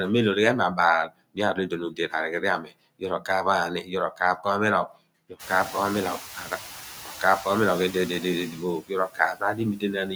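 Right from the start there are noise suppressor artifacts running through the whole clip. The suppressor is pulling the background down by about 4 dB, working band by band on short frames, so the residual noise ducks in the gaps and comes back up under the speech. The effect gets more noticeable after about 5.5 s, when the room noise jumps by about 24 dB and ends up only about 16 dB below the speech.

There's also speech cut by the noise suppressor, three times early on. It mistakes quiet bits of speech for background and turns them down along with it. At 1.9 to 2.13 s it dips by up to about 11 dB, with roughly 0.15 s affected. At 2.63 to 2.73 s it's about 12 dB, and at 3.83 to 3.92 s, right after "ghan ni", about 10 dB, each around a tenth of a second. Each spot sounds swallowed or faint.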